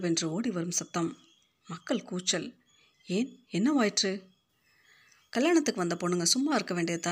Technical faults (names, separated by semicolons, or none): pre-emphasis left on